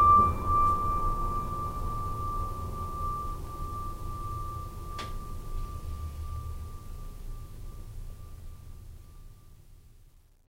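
No technical faults are audible.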